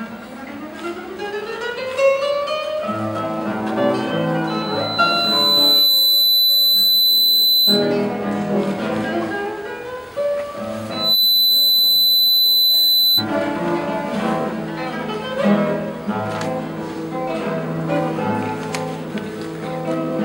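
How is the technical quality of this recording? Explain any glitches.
The recording has two feedback squeals and one brief stutter.

Loudspeaker feedback squeal, 4.47 to 7.94 s and 10.90 to 13.25 s: the microphone picks up its own loudspeaker, and at 4 kHz the loop gain passes unity. A pure 4 kHz tone swells to about 5 dB above the programme, over roughly one and a half seconds the first time and almost instantly the second.

Repeated frames, 14.41 to 14.44 s: one compressed block was played twice, so 26.1 ms of audio repeats and the clip grows by that amount. The result is a tiny stutter or blip, and the block length fits a single MP3-style frame.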